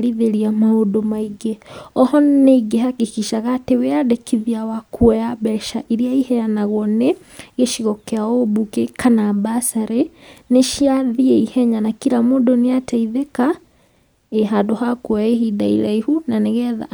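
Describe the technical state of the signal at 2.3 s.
At 2.3 s the speech signal is intact, with no audible fault at that moment.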